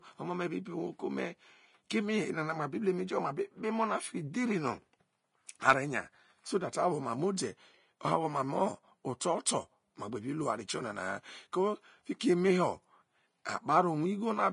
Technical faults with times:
0.00-14.52 Vorbis compression
12.19 pre-echo

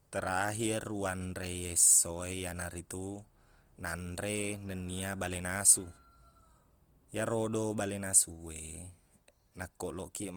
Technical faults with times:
0.00-10.37 Opus compression

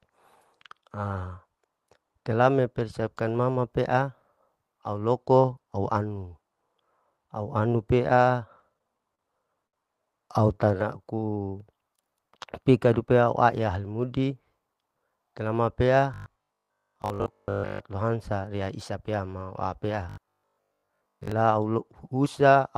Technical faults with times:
8.59-9.21 repeated stalls (stutter)
9.67-9.75 short stall from a late packet
10.65-12.39 jitter buffer slow-down
14.29-15.49 jitter buffer speed-up
16.14-17.84 robotic sound from repeated short buffers
20.09-21.32 robotic sound from repeated short buffers

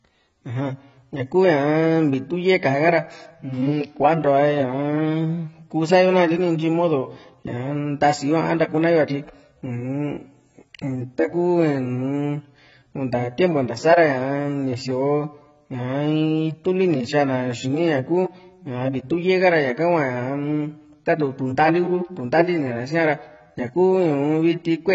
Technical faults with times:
0.00-24.94 AAC compression

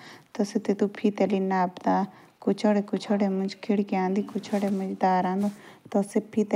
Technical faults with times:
none

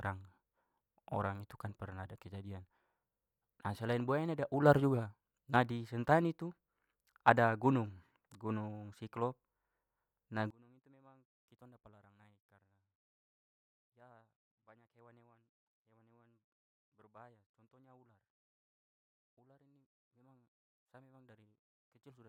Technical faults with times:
10.50-22.29 one channel inverted

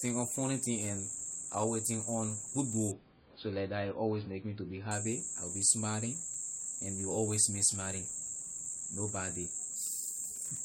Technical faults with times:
2.91-4.91 adaptive stream at a lower bitrate

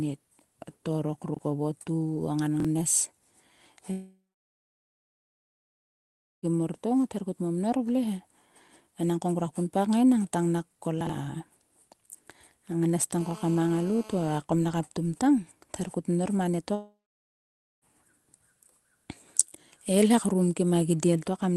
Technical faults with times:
1.34-1.39 chunks out of order
2.60-2.65 chunks out of order
3.91-6.46 long network dropout
11.01-11.09 chunks out of order
13.18-14.39 GSM phone buzz
16.75-17.85 long network dropout

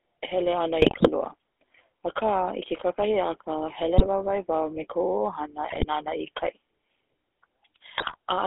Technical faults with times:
0.00-8.47 GSM full-rate codec
0.82-1.09 GSM bit errors
3.98-4.07 GSM bit errors
5.70-5.86 GSM bit errors
7.92-8.16 GSM bit errors

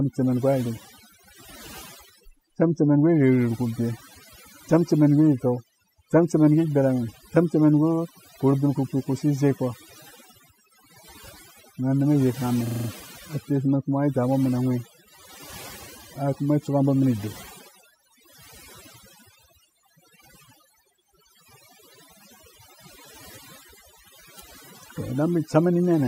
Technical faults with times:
0.00-26.07 overdone noise removal
12.67-12.89 system hang loop

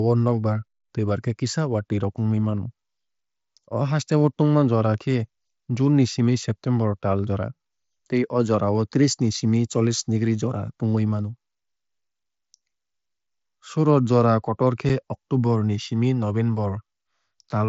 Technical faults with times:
14.89 unconcealed Bluetooth headset packet loss

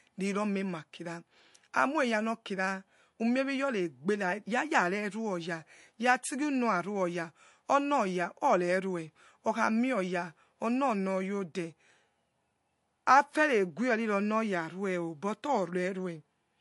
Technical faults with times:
0.00-16.61 MP3 compression

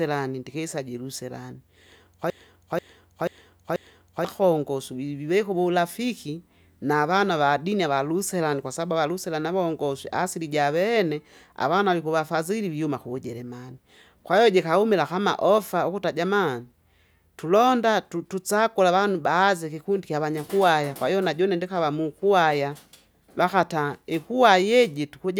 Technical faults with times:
2.30-4.25 broken-record loop

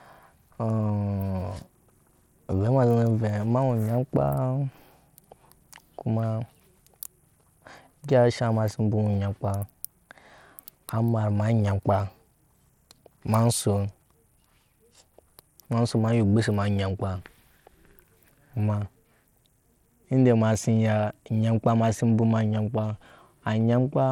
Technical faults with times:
0.00-24.11 Bluetooth SBC compression

